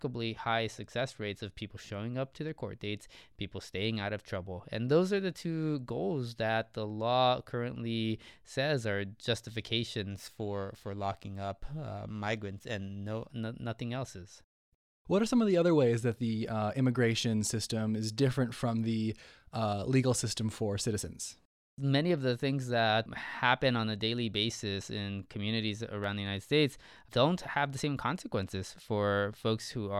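From 10.1 to 13.3 s, just before "no nothing else is", the speech takes on a rough, metallic edge from periodic clock jitter: interference modulating the converter clock at around 3 kHz, spawning sidebands at that spacing around every component, strongest on high-frequency content.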